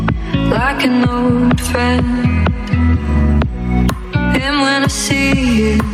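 Gain pumping runs through the whole clip, with the gain swinging by roughly 10 dB. The likely cause is input gain set far too high, with a fast limiter clamping each peak and squashing the dynamics.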